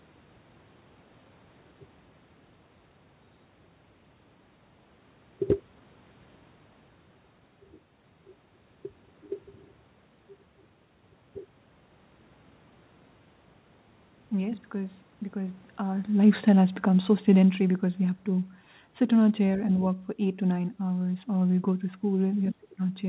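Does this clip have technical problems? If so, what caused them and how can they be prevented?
Yes. There is automatic gain falling from 16.1 to 17.88 s, ending just before "we have". The gain control judged the input too loud or its background noise too strong and lowered its gain gradually by about 6 dB. The speech and the room noise sink together. Lowering the microphone input level prevents this.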